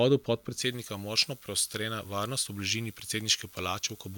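From 0.62 s to the end, the speech turns thin, bright and hissy, with sibilants jumping forward and the lower body of the voice receding. This is pre-emphasis left on: a treble boost applied for recording or transmission was never undone by the matching de-emphasis. The lift follows the J.17 curve, leaving 10 kHz about 11 dB hotter relative to 1 kHz than it should be, which is why every high-frequency consonant sounds exaggerated.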